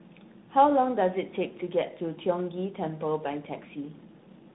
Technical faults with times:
0.00-4.54 tandem speech coding

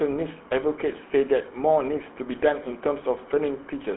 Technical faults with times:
0.00-3.96 GSM full-rate codec

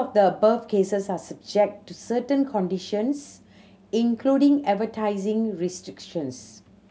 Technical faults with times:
none

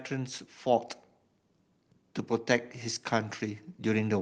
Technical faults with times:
3.39-4.21 automatic gain rising

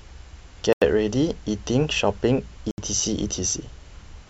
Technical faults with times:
0.73-0.82 Bluetooth stall
2.71-2.78 Bluetooth stall

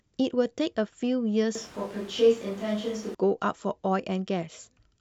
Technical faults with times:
1.55-3.15 switch to a distant microphone

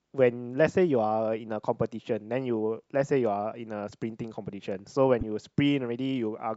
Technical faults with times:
5.21-5.23 damaged data in a compressed stream

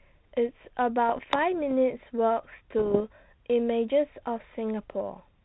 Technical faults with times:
1.09-1.54 bit errors on an ADPCM link
2.78-3.01 bit errors on an ADPCM link

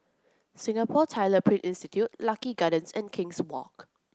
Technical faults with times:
none

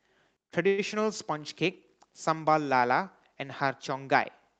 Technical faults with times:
0.37-0.53 sudden gain jump
0.67-0.80 call audio freeze

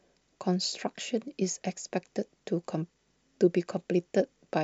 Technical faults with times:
none

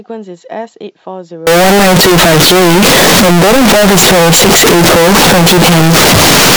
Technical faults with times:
1.47-6.56 float read as integer

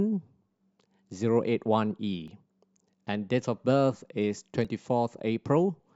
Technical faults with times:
2.28 damaged data in a compressed stream
4.65 damaged data in a compressed stream

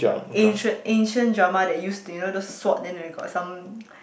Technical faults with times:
none

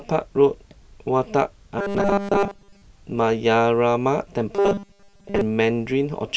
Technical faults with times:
1.79-2.82 robotic sound from repeated short buffers
4.55-5.41 robotic sound from repeated short buffers

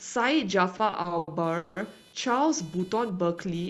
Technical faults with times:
0.00-3.70 computer activity noise
0.77-1.78 repeated stalls (stutter)

